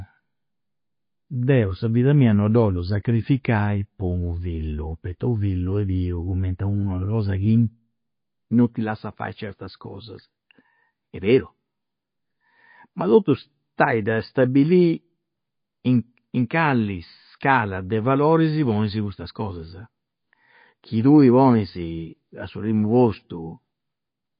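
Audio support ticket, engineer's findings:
Watery, swirly speech throughout, sibilants chirpy and metallic, consonant attacks smeared; nothing above 5.1 kHz. Likely MP3 compression, damage plainly audible, consistent with roughly 24 kbps: encoder low-passing treble, zeroing weak spectral lines that flicker frame to frame.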